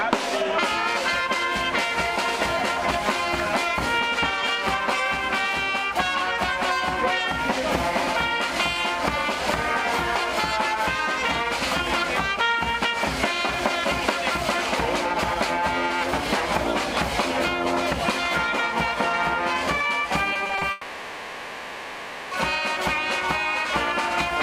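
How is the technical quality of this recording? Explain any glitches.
Two glitches sit close together near the end of the recording. Both are network faults, and both make the audio break up and then blur over.

From 20.33 to 20.63 s there is repeated packet loss, with a robotic sound. The audio turns choppy and robotic as five short holes, the longest about 20 ms, punch through it. Each hole is patched by repeating the last bit of sound. About a third of that stretch, roughly 100 ms, is this filler.

From 20.71 to 22.33 s the sound stops and is replaced by a smeared, droning continuation of itself that lasts about 1.6 s. The audio then resumes without the missing portion. This is likely a long network dropout, where the receiver kept stretching the last audio it had until fresh packets arrived.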